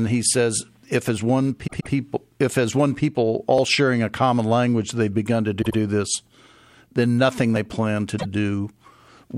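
At 1.66 to 1.92 s, just after "says if as one" and before "if as one people", the speech stutters: a 130.6 ms block of compressed frames plays twice more, adding about 261 ms. This is the repeated-frames fault, where the same stretch of encoded audio was written or sent again.

At 3.58 s a brief skip of roughly 20 ms cuts into the speech with no silence between the joined sides. This is audio missing between chunks. The cause is likely a recorder or processor losing a sliver as it closes one 4-second chunk and opens the next.

From 5.61 to 5.77 s, after "language they've begun to", a 78.4 ms block repeats twice, adding about 157 ms of stutter.

At 7.56 s, between "then nothing" and "plan to", there is a second short skip of roughly 20 ms. It lands about 4 s after the first, matching the chunk spacing.

At 8.18 to 8.26 s, a 78.4 ms block plays once more, adding 78.4 ms. These repeats lengthen the audio by replaying material, which sets them apart from the two skips, where material is removed and the speech jumps forward.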